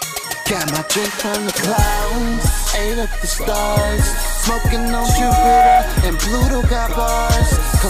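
At 4.47 s a loudspeaker feedback squeal begins: a steady 740 Hz tone swells over roughly a second until it sits a few decibels above the rest of the sound, then stops at 5.84 s. The microphone was picking up its own loudspeaker, and loop gain exceeded unity at that frequency.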